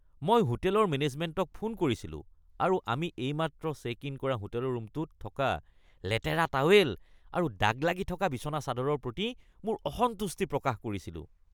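Nothing in this speech recording points to a technical fault: there's no moment where the audio breaks, jumps or changes character, so there's nothing to flag.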